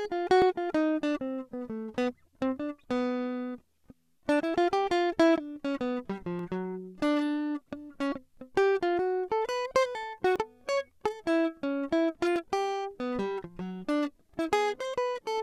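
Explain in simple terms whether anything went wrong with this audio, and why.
Small clicks or tiny skips break into the music at 0.42, 6.39, 8.37, 10.36, 12.36 and 14.34 seconds, each between about 5 and 17 thousandths of a second long. This is an overlap between stream segments. The music arrives in 2-second pieces, and when two pieces claim the same moment, the player trims that shared slice even though nothing was actually doubled. A sliver of real music disappears and the waveform jumps, producing the skip.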